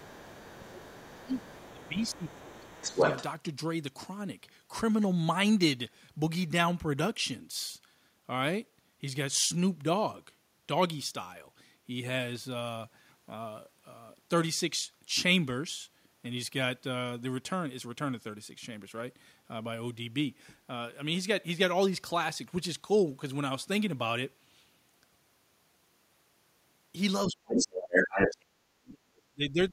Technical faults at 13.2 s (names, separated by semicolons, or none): none